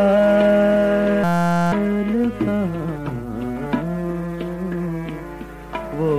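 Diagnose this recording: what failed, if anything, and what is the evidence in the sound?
The failure sits at the driver or buffer stage: a system hang loop. From 1.24 s to 1.72 s the sound stops and is replaced by a steady buzz at about 172 Hz. The computer or its audio driver froze. The hardware kept replaying the same short stretch of its ring buffer. Each loop lasts 5.8 ms, which fits a 256-sample buffer. About half a second of the real audio is lost.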